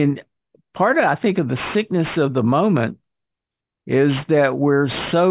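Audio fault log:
Throughout: aliasing. The speech was downsampled without an anti-alias filter, so content above 4 kHz folds back beneath it as gritty, metallic tones only moderately quieter than the speech, which fits an 8 kHz rate. Plain band-limiting would sound muffled, not harsh.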